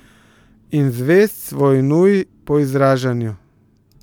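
A short bit of speech, and nothing technically wrong turns up anywhere in it.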